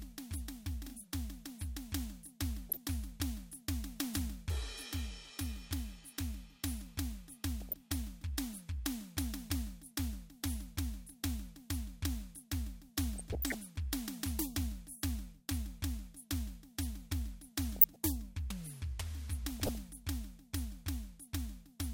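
DAB burbling breaks into the music five times: 2.69 to 2.77 s, 7.62 to 7.74 s, 13.16 to 13.55 s, 17.76 to 17.96 s and 19.60 to 19.75 s. Bit errors of a few tenths of a percent slip past error correction, corrupting samples, which puts short blips of noise in single sub-bands, and scale factors, which make sub-bands jump in level for up to a frame. Each burst brings short blips of noise. A spectrogram shows blocky rectangles popping in narrow bands, and the waveform shows erratic amplitude bumps.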